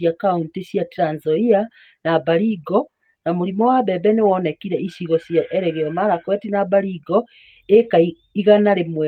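No technical faults can be heard anywhere in this speech recording. Nothing in it calls for a timestamp or a measured value.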